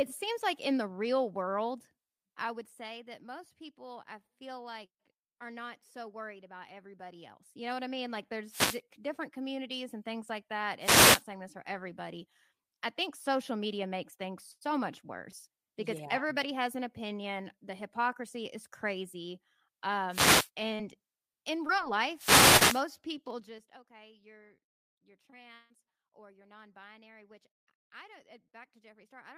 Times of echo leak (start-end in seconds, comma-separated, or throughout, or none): none